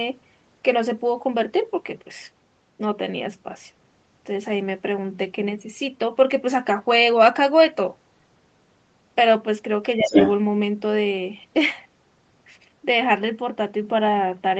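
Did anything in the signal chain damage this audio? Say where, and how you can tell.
Yes. From 9.96 to 10.13 s the speech dips by about 15 dB for roughly 150 ms, in the call processing stage. This is likely speech suppressed in double talk: the echo canceller ducked the talker during overlap, unlike a network dropout, which would cut cleanly to silence or leave a concealment buzz.

From 9.99 to 10.33 s the other side's voice is leaking through, a second voice a few dB above the talker that is likely loudspeaker echo the canceller failed to remove. It overlaps the dip and outlasts it, which separates it from crosstalk in analogue wiring.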